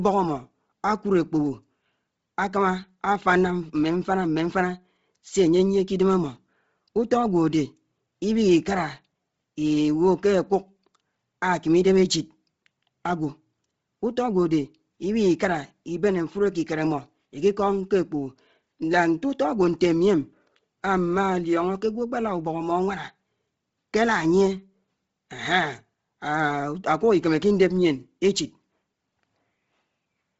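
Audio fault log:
throughout Bluetooth LC3 compression: the speech is cut off above 7.8 kHz, and its upper band has a heavy breathy, grainy noise fill rather than a clean roll-off. This is likely LE Audio's LC3 codec at a low bitrate, which fits about 24 kbps with 7.5 ms frames.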